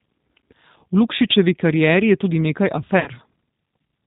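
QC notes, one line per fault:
Throughout: G.729 codec. The speech has a plainly audible rough, slightly synthetic edge, with a dull, boxed-in top end where nothing above 4 kHz comes through. This is what G.729A at 8 kbit/s sounds like. Each 10 ms frame is rebuilt from a vocal tract filter, a pitch predictor and a handful of pulses instead of the original waveform. The result stays intelligible, but fine texture and brightness are gone.
3.00 to 3.08 s: VoIP packet loss concealed by the speech codec. A short stretch of the speech is stretched into a buzzy tone or coloured noise that fades instead of continuing naturally. About 60 ms of audio was lost, which fits three 20 ms packets dropping in a row. The decoder filled the gap by repeating its last pitch and filter settings at falling gain, so the sound stays weak or distorted for tens of milliseconds after the packets return.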